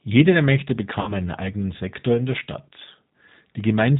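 Throughout, the G.729 codec's model-based coding leaves the speech rough and slightly synthetic with nothing above 4 kHz, which fits 8 kbit/s, unlike a simple band-limit. From 1.01 to 1.13 s, VoIP packet loss concealed by the speech codec stretches the last sound into a fading buzzy tone or coloured noise rather than silence, and the voice stays weak or distorted briefly afterwards.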